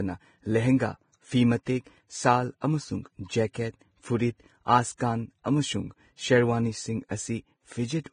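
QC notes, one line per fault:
throughout, Vorbis compression: The speech was likely coded with Vorbis at a very low rate, and the damage is heavy. The band stops at 9.7 kHz, and the treble below that is quantised so coarsely that fine detail turns into noise of similar energy. The speech sounds hissy and grainy, tonal parts sound roughened, and onsets lose their edges. The degree of damage fits a bitrate around 20 kbps.
1.63–1.67, 2.60, 3.53, 4.97–5.00, pre-echo: The transform coder spreads quantisation noise across a whole block. When a sharp onset lands late in a block, noise scaled to that loud part also fills the quiet stretch just before it. Each of these onsets is preceded by a brief hiss of about 35, 17, 18 and 31 ms respectively, and the attack itself sounds softened. The first comes just before "ꯁꯥꯜ ꯑꯃꯁꯨꯡ", and the third comes just after it.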